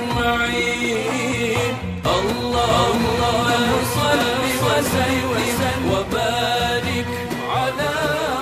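A doubled audio track runs from 2.70 to 5.98 s: a second, full-band copy of the sound trails the original by roughly 0.7 s at about equal loudness, with no decay or room colour, starting and stopping abruptly, likely from a second, slower capture path.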